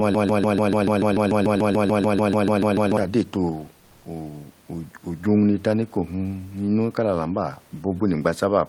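A broken-record loop fills the speech clip from its start to 2.97 s: a 146 ms fragment repeats back to back 19 times, likely because the stream stalled and kept resending its last buffer. Comfort noise in place of the background follows from 3.79 to 4.05 s, where 260 ms of the real room noise becomes smoother, steadier noise about 2 dB quieter, which fits Opus discontinuous transmission.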